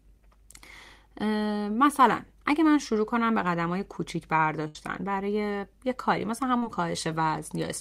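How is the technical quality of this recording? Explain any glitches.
The speech has three dropouts from network transmission: two short concealed packet losses and one burst of packet loss.

At 2.52 s and again from 6.58 to 6.63 s there is short concealed packet loss. Audio failed to reach the decoder in time, so the receiver extended the preceding sound to bridge the gap before blending back into the real signal. The first gap covers about 10 ms with a 4 ms fill. The second is wider, around 40 ms with a 42 ms fill, and sounds like a brief smear or wobble.

From 4.68 to 4.76 s a burst of packet loss removes roughly 70 ms of consecutive audio. The receiver held the last sound for about 68 ms, fading it as the gap continued. What you hear is a held buzz or fading hiss that replaces the real signal. Speech then resumes slightly further along, and the material that should have been in that stretch is missing.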